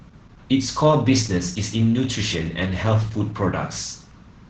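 Opus voice compression throughout. SILK coding cuts everything above 8 kHz and coarsens the excitation. Speech sounds muffled, hoarse, slightly robotic, fitting about 10 kbps.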